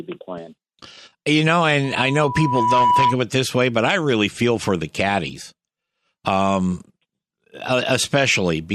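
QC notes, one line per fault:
1.84–3.18 s, loudspeaker feedback squeal: a steady tone near 983 Hz swells over roughly a second until it sits about 5 dB above the speech, then stops. The microphone is hearing its own loudspeaker, and at that one frequency the loop gain passes unity, so the tone keeps feeding itself.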